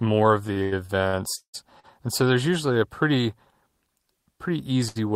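Speech with repeated stalls (stutter) from 0.47 to 1.86 s: seven jitter-buffer underruns held about 461 ms, roughly a third of that span, the longest 184 ms, appearing as smeared, flat-banded repeats on a spectrogram. At 4.88 to 4.97 s, a short stall from a late packet stretches one sound for 75 ms, visible as a brief repeated waveform cycle.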